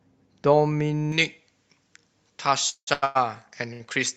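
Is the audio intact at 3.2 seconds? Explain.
No. From 1.12 s to the end, pre-emphasis was left on, with the treble boost never undone. It sits about 11 dB hot at 10 kHz, so it sounds thin and hissy. Just before, from 3.04 to 3.17 s, there's a call audio freeze, likely from late packets draining the jitter buffer. A fading buzz fills 110 ms, then the audio picks up where it stopped, 110 ms late.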